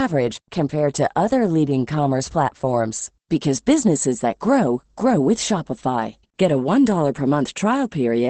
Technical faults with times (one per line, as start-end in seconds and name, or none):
0.00-8.29 Opus voice compression